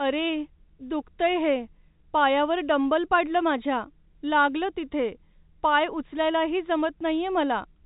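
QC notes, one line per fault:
Nothing to flag on this one: the speech simply comes through ordinary G.711 telephone coding, so the top end stops at 3.8 kHz, within that format's 4 kHz limit.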